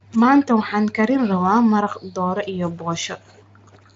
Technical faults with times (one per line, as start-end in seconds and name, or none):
none